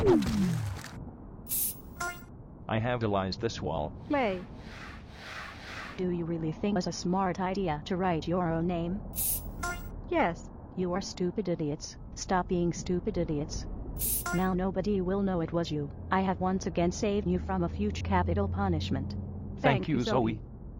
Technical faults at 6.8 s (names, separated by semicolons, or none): audio missing between chunks